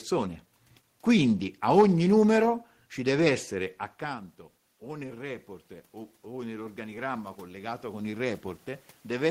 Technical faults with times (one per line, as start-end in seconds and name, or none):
3.13-5.54 automatic gain rising
6.23-8.51 automatic gain rising